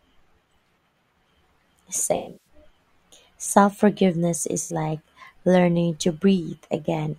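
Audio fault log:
2.16–2.47 s, AAC frame loss with concealment: about 256 ms of audio goes missing in patches spread over roughly 300 ms, with the longest gap around 150 ms. The decoder patches the holes from the last good spectrum, so the speech smears into a noisy, phasey wash.
4.61–4.73 s, AAC frame loss with concealment: a shorter 85 ms dropout that gets the same fill-in treatment. It comes across as a quick smeared blip.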